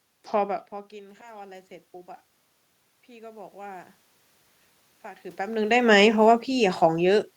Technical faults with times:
0.71-1.76 automatic gain rising
3.06-3.97 automatic gain rising
5.02-5.85 automatic gain rising
5.78-7.31 automatic gain falling

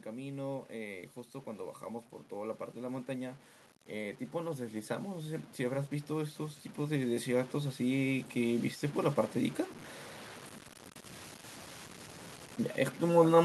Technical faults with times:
0.00-13.45 low bit depth without dither
2.29-9.64 automatic gain rising

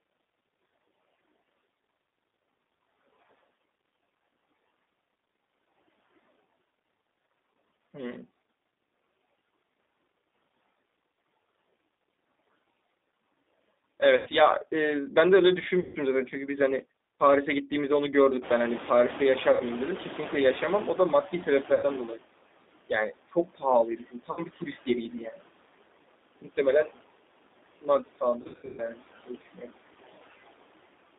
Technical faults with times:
0.00-31.18 noise suppressor artifacts
0.00-31.18 G.729 codec
14.17-14.31 VoIP packet loss concealed by the speech codec
15.80-15.98 VoIP packet loss concealed by the speech codec
18.41-22.17 noise suppressor catching up
19.51-19.63 VoIP packet loss concealed by the speech codec
21.32-22.23 speech cut by the noise suppressor
21.74-21.87 VoIP packet loss concealed by the speech codec
22.89-25.47 speech cut by the noise suppressor
24.31-24.44 VoIP packet loss concealed by the speech codec
26.41-26.99 speech cut by the noise suppressor
27.81-29.74 speech cut by the noise suppressor
28.42-28.83 VoIP packet loss concealed by the speech codec

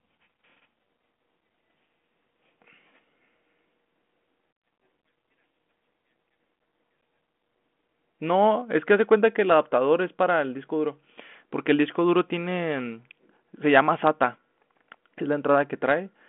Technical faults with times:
none

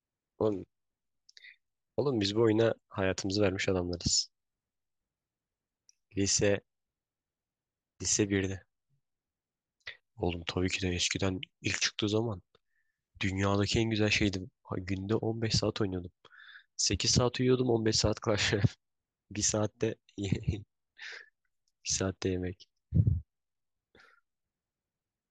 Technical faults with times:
none

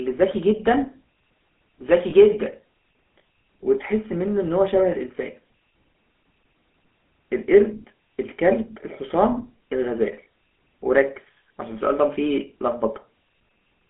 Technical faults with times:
0.00-13.90 GSM full-rate codec
2.10-2.13 lost GSM frames

